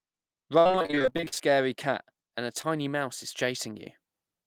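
From 0.59 to 1.56 s, just before "cat and a", the speech breaks up into that choppy, robotic texture you get from repeated packet loss. About twenty packets went missing or arrived too late across that stretch, the longest hole around 58 ms. Each time, the receiver papered over the gap by extending the last bit of sound, so roughly half of that second is synthetic fill. It comes out choppy and stuttery, with fragments of the speech simply gone.

Later, at 2.62 to 2.65 s, between "cat and a" and "mouse is", there's a single short concealed packet loss. About 20 ms of audio never made it to the decoder in time, and the receiver patched the hole by continuing the preceding sound before easing back into the real signal. It's much subtler than the earlier run: a quick smear or wobble right at the join rather than any sustained choppiness.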